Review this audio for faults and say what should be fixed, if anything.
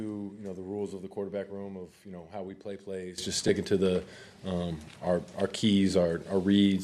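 At 3.18 s there is a sudden gain jump of about 15 dB that lasts to the end of the clip. The likely cause is a digital gain setting, or a bit shift, applied between one sample and the next with no ramp. The sound and its background noise step up together at that instant, with an abrupt edge where the level changes. To prevent this, any gain change should be ramped over several milliseconds instead of switched in a single sample.

At 3.48 s there is a brief dropout of about 10 ms, consistent with one lost LE Audio frame. The gap fits a single 10 ms LC3 frame. The decoder filled it by reusing the previous spectrum with randomised signs, so the sound at that point turns into a short noisy smear before normal decoding resumes. To prevent this, the Bluetooth link needs more margin, through better signal strength, less interference or retransmission headroom, so that frames arrive intact.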